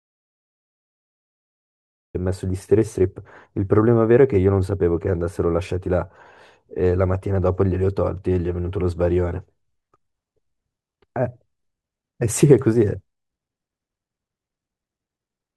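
Speech clip with an audio dropout to silence already in progress when it begins: from 0 to 2.15 s there is silence with no room tone, and the speech only starts afterward. The likely cause is lost input, such as a disconnected device or a stray mute, while recording continued.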